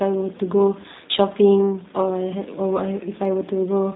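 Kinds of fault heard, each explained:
G.729 codec: throughout, speech is rebuilt from a vocal tract model and sparse pulses, cut off above 4 kHz and plainly rough, fitting an 8 kbit/s coder.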